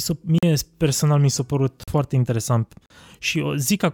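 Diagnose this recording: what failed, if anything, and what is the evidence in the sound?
Buffer underruns: three blocks of digital silence, each about 43 ms, cutting out and back with no fade, at 0.38 s (just before "personal mi"), 1.84 s and 2.86 s, which fits a 2048-sample buffer.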